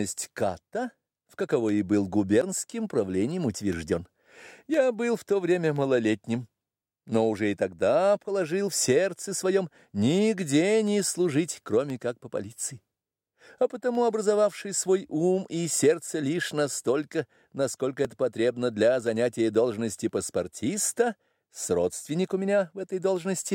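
From 0.66 s to 23.17 s, periodic USB or driver dropouts recur every 1.024 s, about twenty in all. Each time, a background task stalls the audio path and a tiny fraction of a millisecond is replaced by silence, giving an evenly spaced tick.

At 2.42 s there is an audible jump in the sound, roughly 20 ms missing with no gap of silence. This is likely a dropped buffer (overrun): samples were overwritten before being read, and the two sides were spliced directly. Unlike the ticks, it is isolated and skips ahead.

At 18.05 s a smaller skip of the same kind occurs, around 5 ms lost. It again joins the audio across the missing piece rather than inserting silence, and it falls outside the regular 1.024 s rhythm.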